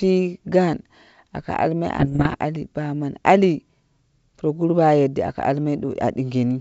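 From 1.98 to 2.35 s the speech breaks into pops and rough bursts, the signature of bit errors on an ADPCM link, here at around one percent. Each flipped bit corrupts the decoder's step size and prediction, so the damage rings on briefly. The waveform shows jagged spikes and sudden level jumps, and the spectrogram shows broadband vertical streaks across the 64 kbit/s G.722 band up to 7 kHz.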